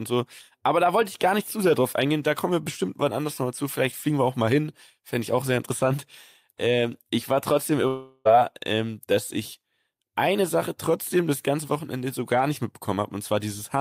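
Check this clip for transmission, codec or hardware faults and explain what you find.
One fault is present in this speech clip.

Long network dropout, 7.87 to 8.27 s, right after "ich war trotzdem": about 0.38 s of audio likely never arrived. The receiver stretched the last sound into a fading buzz or hiss filling the whole gap, with no true silence, and "ähm dass ich eine" resumes with the lost part missing.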